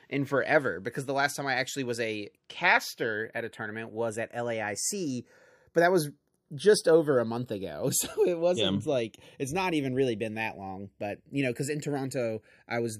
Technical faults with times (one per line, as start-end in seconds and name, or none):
0.00-13.00 channels drifting apart